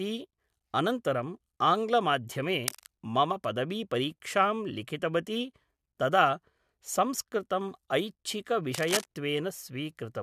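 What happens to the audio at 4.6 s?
Nothing goes wrong at 4.6 s; the speech is intact there, with no dropout, click, distortion or other fault.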